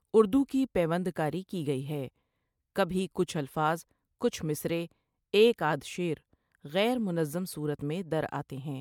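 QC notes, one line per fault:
Throughout, generation loss: the speech sounds swirly, smeared and hollow, with blurred attacks. Likely repeated MP3 encoding, about three passes, at what sounds like 128 kbit/s.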